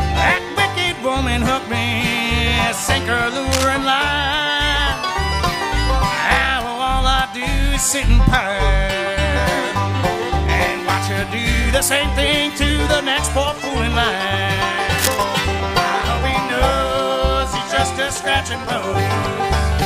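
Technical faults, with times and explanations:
3.51–3.69 s and 14.97–15.24 s, cable scratch noise: brief bursts of rough, crackly rustle sitting not far below the sound, likely a worn cable or connector being moved.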